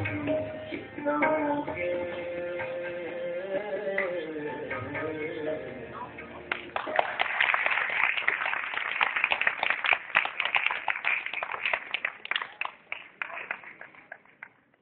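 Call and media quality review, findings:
Damaged data in a compressed stream at 0.71 s: brief disturbance. Decoder misreads corrupted frame bytes and resyncs at the next header. Unlike an analogue click, this is a frame-level decode break.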